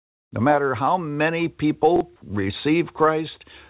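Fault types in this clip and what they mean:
Chunks out of order: around 1.96 to 2.01 s, a 21 ms chunk plays one slot late, giving a brief jumbled moment.
Sound dropped by the voice detector: from 2.16 to 2.22 s the sound gives way to steady comfort noise, likely because the sender's detector took it for background.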